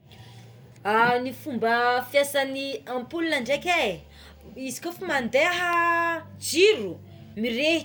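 From 2.73 s to 7.73 s the speech is interrupted by periodic USB or driver dropouts. Once a second, a background task stalls the audio path and a tiny sliver of signal, well under a millisecond, is replaced by silence. Each gap is heard as a regular tick over the speech. On a waveform the trace drops briefly to near silence, and a spectrogram shows thin, evenly spaced vertical broadband lines.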